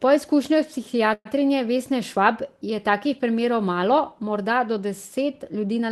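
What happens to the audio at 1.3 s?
Just before 1.3 s, from 1.13 to 1.27 s, the speech stops and its last sound is stretched into a short fading buzz or hiss, ending in about 40 ms of silence. This is a call audio freeze, likely from delayed packets emptying the jitter buffer. The receiver filled the wait with synthesised sound, then resumed where it left off, so nothing is lost but everything afterward arrives about 0.12 s late.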